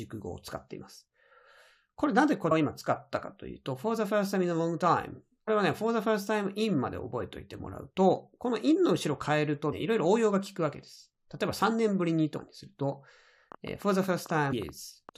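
Damaged data in a compressed stream shows up first at 2.50 s and again at 5.47 s, 9.72 s, from 12.38 to 12.40 s, and at 14.52 s. At each point part of the encoded speech stream is corrupt, so the decoder misreads those frames, loses sync and hunts for the next valid frame header. Each lasts only a few hundredths of a second and comes through as a short squawk or blip.

A train of clicks runs from 13.52 to 15.10 s: about twenty sharp ticks at an average of about 9.4 per second, spaced unevenly and peaking at about the level of the speech itself. The repeated pulses of similar shape at an uneven pace most likely come from electrical interference or a faulty connection or power supply. The final data glitch at 14.52 s falls inside this burst of ticking.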